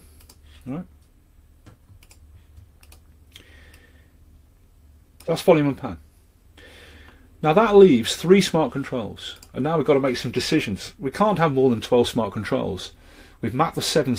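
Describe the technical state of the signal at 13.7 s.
At 13.7 s the signal is intact, with no audible fault at that moment.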